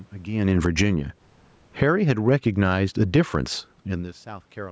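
From 0.32 to 0.97 s, automatic gain falling: the gain control judged the input too loud and pulled its gain down by about 11 dB, so the speech and the room noise behind it sink together rather than the speech alone. It happens again from 1.67 to 3.32 s, by about 11 dB. Automatic gain rising overlaps both, from 0.88 to 1.4 s (about 10 dB) and from 1.92 to 3.66 s (about 9 dB). The control raised its gain after judging the level too low, so speech and background swell together. The result is an audible pumping of the whole signal, separate from the talker's own movement near 0.5 s and 4 s.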